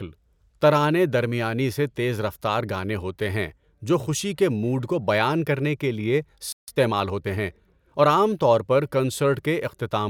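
At 6.52 s, right after "بیان کرنے کے لیے", the speech cuts to silence for about 157 ms until 6.68 s. This is a playback stall, most likely the player running short of buffered data or its output thread being briefly blocked.

From 6.68 s to 8.24 s the player makes up the lost time with time-compressed catch-up, running at 1.1x by cutting and cross-fading short segments. The speech sounds hurried at normal pitch, settling back to normal pace by "طور پر".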